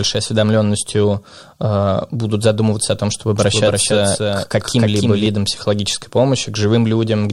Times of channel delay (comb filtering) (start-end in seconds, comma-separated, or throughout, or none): none